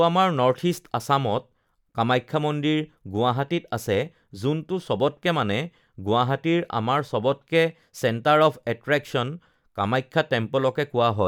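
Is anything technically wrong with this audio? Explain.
No, nothing technically wrong here.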